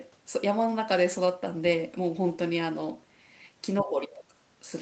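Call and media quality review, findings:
Speech dips 3.81–4.34 s, level down by about 15 dB at the deepest point, roughly half a second affected. Speech suppressed in double talk, likely: echo canceller could not separate the near-end talker from loudspeaker echo while both sides spoke, so it turned both down. Bandwidth ends at 8 kHz, from the call microphone processing. Its high-pass filter removes the lowest bass, which is expected.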